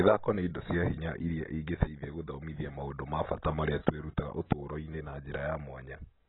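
Throughout, the speech has nothing above 4 kHz and its sibilants sound fizzy and smeared, likely heavy AAC compression at a bitrate near 18 kbps.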